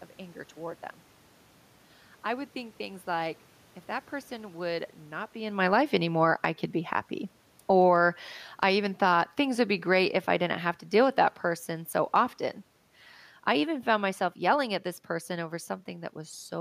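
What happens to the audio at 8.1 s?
At 8.1 s, two automatic gain control moves overlap. Automatic gain falling runs from 7.55 to 12.37 s, lowering level by about 8 dB as the control reacts to input that is too loud or background noise that is too strong. The waveform envelope and the room noise floor shrink together. Within it, automatic gain rising from 7.96 to 8.34 s briefly lifts level by about 4 dB, swelling speech and background at once, seen as a short bulge in the waveform and a brighter spectrogram band.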